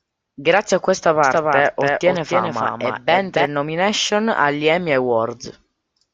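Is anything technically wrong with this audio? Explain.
Yes. A doubled audio track runs from 1.24 to 3.46 s: the speech is likely captured a second time by a slower path, so a full-band copy, somewhat quieter, trails about a third of a second behind, dry and without room colour, starting and stopping abruptly.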